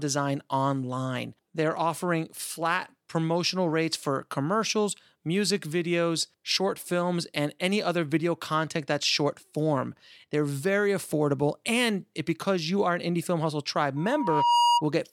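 From 13.96 to 14.84 s, loudspeaker feedback squeal: a 952 Hz tone builds over under a second as the mic-speaker loop exceeds unity gain, ending a few dB above the speech.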